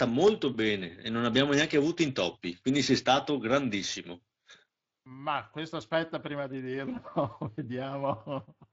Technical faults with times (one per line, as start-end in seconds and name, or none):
none